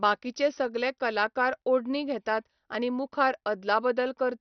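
From start to finish, the speech is dull and cut off above 6.2 kHz. Upper bands drop in and out, so the top end flickers. What remains has a gurgling, granular roughness. The damage is heavy throughout. The likely cause is MP2 compression at a low bitrate, which fits about 48 kbps. The encoder had too few bits to share across its sub-bands. It switched off the high bands and quantised the rest coarsely.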